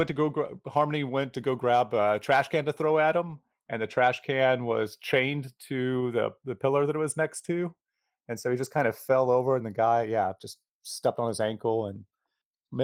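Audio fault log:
throughout: channels drifting apart. The two sides of this speech run on clocks about 20 parts per million apart, so their gap creeps to a fraction of a millisecond; summed to mono, the comb notches glide slowly, a slow flanging rather than a fixed offset's static colouring.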